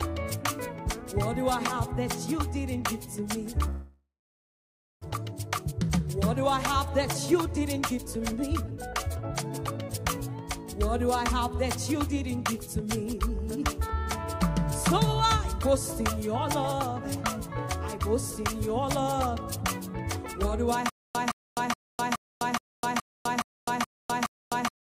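From 3.69 to 5.04 s there is a long network dropout, likely from packets that stopped arriving. The receiver stretches the last sound into a fading buzz, then leaves about a second of silence. About 1 s of audio is lost outright. On a spectrogram, smeared energy thins into a blank band before the audio resumes further on.

Two stretches of jitter buffer speed-up follow, from 5.17 to 6.54 s at 109% and from 7.33 to 10.17 s at 106%. After a delay build-up of around a third of a second, the receiver drains its buffer by cutting out pitch-period slices, roughly 150 ms and 200 ms in total. The sound hurries while its pitch stays put. On the waveform, cycles sit compressed with tiny splice points.

From 20.89 s to the end there is stutter with silent gaps, likely from a player that stalled and kept retrying. A 166 ms fragment repeats nine times, each followed by about 255 ms of digital silence, so the cycle is 421 ms. 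The waveform shows identical blocks separated by flat silent stretches.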